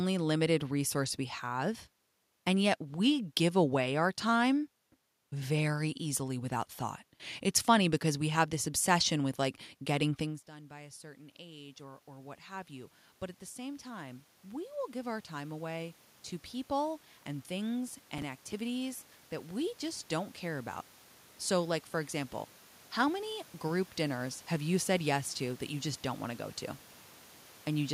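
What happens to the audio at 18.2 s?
A processor overload crackle runs from 17.88 to 18.6 s. Deadlines for buffers of around 5 ms are missed about ten times, each gap refilled with old audio. This produces a gritty tearing over the speech.

Automatic gain rising is also under way, from 10.19 to 24.28 s. After the talker moved away, the gain climbs by about 20 dB and recovers part of the 23 dB drop.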